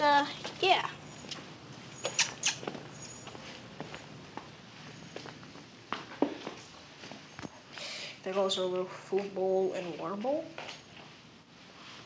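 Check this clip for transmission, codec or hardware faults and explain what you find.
No transmission, codec or hardware faults turn up; the audio arrives intact through the call path, with the usual coding texture of a wideband call codec such as G.722 and nothing above 8 kHz.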